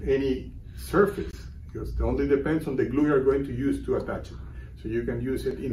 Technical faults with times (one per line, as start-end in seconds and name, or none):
1.31-1.33 gap at a join of encoded pieces